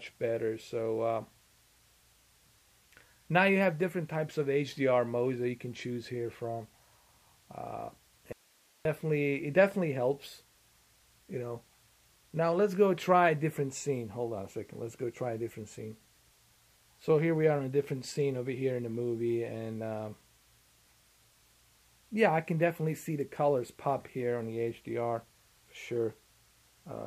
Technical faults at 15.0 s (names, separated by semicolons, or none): none